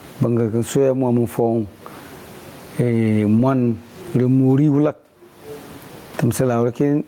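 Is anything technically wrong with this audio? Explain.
Yes, there is gain pumping throughout the speech. The gain swings by around 25 dB, pulled down under every loud syllable. This is likely from gain set far too high feeding a fast limiter. The waveform looks flattened, with the room noise about 42 dB below the speech.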